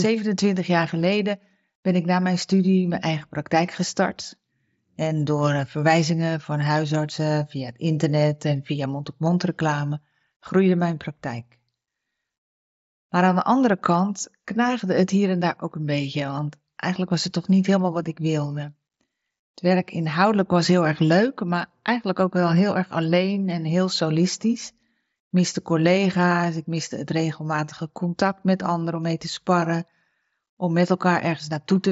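No technical faults occur anywhere in the speech, which reaches the listener over the wideband Bluetooth headset link.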